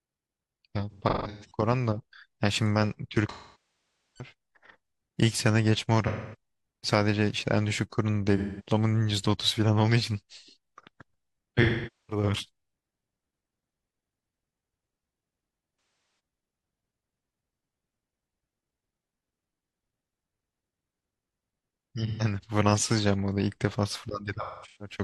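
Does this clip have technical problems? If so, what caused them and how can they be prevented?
Yes. AAC frame loss with concealment occurs at 0.90–1.55, 3.30–4.32, 6.07–6.35, 8.37–8.69, 11.62–12.23, 15.72–16.19, 22.07–22.23 and 24.41–24.95 s. The decoder repeats the last good spectrum, giving smeared, phasey patches up to about 0.85 s. Robust transport with retransmission or forward error correction prevents this.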